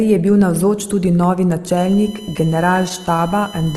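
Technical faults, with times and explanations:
2.71–3.20 s, repeated stalls (stutter): five brief holds, longest 12 ms, stretch the sound as the jitter buffer keeps running dry, unlike dropouts, since nothing is lost.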